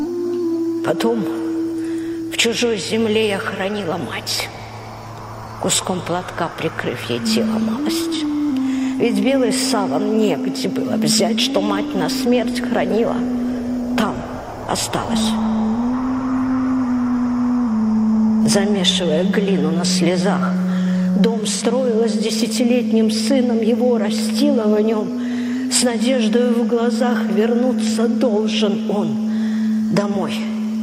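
AAC frame loss with concealment occurs at 8.16 s and again at 21.55 s in this audio. Each is a brief smeared, noisy patch of about 43 ms, which fits a single missing frame that the decoder filled by reusing the last good spectrum.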